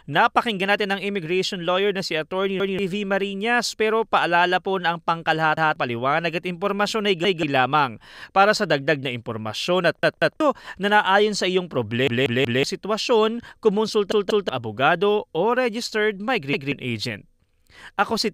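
Speech with repeated buffer stutters at 2.60, 5.57, 7.25, 10.03, 12.07, 14.12 and 16.53 s. Each is a 186 ms chunk, which fits an 8192-sample buffer, played again with hard joins because new audio arrived late. Most repeat once. The ones at 10.03 and 14.12 s repeat twice, and the one at 12.07 s three times. Roughly a fifth to half a second of speech goes missing each time.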